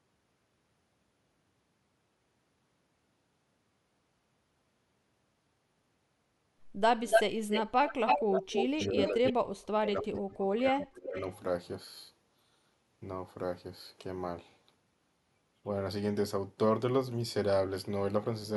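From 7.09 to 7.23 s, 7.5 to 7.62 s and 7.87 to 8.88 s, an echo leak returns the speech about 290 ms late, sometimes louder than the original. This is likely a far-end loudspeaker echo that the echo canceller missed. It is a distinct repeat rather than room reverberation.

Speech suppressed in double talk follows at 8.42 to 8.5 s and 8.75 to 11.16 s. The speech sinks deeply, almost to silence, likely during overlapping talk. That makes it a level dip rather than a clean packet dropout.

Fainter echo scraps return at 9.07 to 9.32 s, still about 290 ms late, and at 11.15 to 11.36 s, about 363 ms late.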